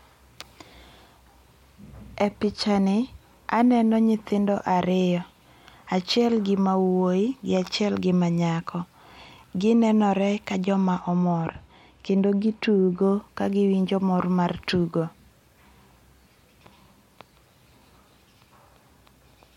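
Speech, with de-emphasis applied wrongly from 11.00 to 13.02 s, after "nenore ka jo ma" and before "ka gi winjo mor". Treble slopes gently down, about 8 dB at 10 kHz, unlike a low-pass filter's abrupt cutoff.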